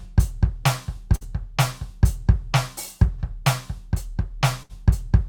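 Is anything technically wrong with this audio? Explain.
Yes. The music has two bursts of packet loss, at 1.15 to 1.24 s and at 4.63 to 4.72 s. Each time, a run of packets failed to arrive in time, and the receiver filled the hole by extending the last sound while turning it down, for about 55 ms and 63 ms respectively. The music then picks up further along, so each dropout sounds like a brief smeared, fading hold followed by a small jump, with about 60 ms of material skipped.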